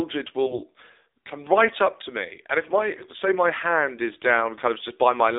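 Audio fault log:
throughout: AMR narrowband mobile codec. Everything is squeezed into a phone band of about 300 Hz to 3.7 kHz with nothing on top, and the speech is plainly buzzy and a bit synthetic, the sparse-pulse vocal-tract model showing through at what sounds like a low mode around 7.4 kbps.
0.46–0.63 s and 2.98–3.17 s: AMR bit errors. The second burst falls between "me and if my" and "my hand is". Pitch and level hold, but the voice turns hoarse and gargly. A few percent of the weakly protected bits flipped across roughly eight or nine 20 ms frames, so the excitation pulses landed in the wrong places and the gain and spectrum values drifted.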